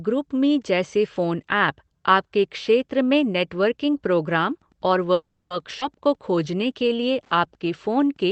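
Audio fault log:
4.47 to 8.31 s, Wi-Fi interference: A steady faint ticking runs under the speech, repeating every 102.4 ms, or about ten times a second. It sits far below the speech. A nearby Wi-Fi radio's beacon bursts are being rectified by the audio circuit, so each beacon becomes a click.
5.13 to 5.52 s, call audio freeze: The speech stalls, and the last sound is stretched into a fading buzz or hiss. It then falls silent for about 180 ms before resuming where it stopped. Packets were likely held up and the jitter buffer ran empty. The 370 ms pause adds delay, with nothing lost.
5.80 to 5.83 s, skip ahead: Playback jumps forward abruptly, with only a 10 ms join. Roughly 70 ms of speech is gone, and the two sides are spliced almost directly. Audio was dropped while later audio was already waiting, which cut the built-up delay by about that much.
6.08 to 6.93 s, jitter buffer slow-down: The speech drags at 92% speed, with the pitch unchanged. 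Sounds are drawn out. The receiver repeated single pitch periods to rebuild its reserve, adding 72 ms over this stretch.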